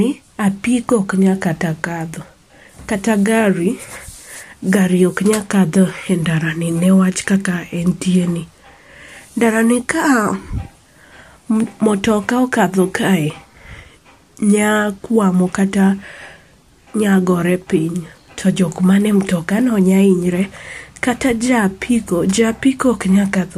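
No technical faults can be heard anywhere in this speech recording.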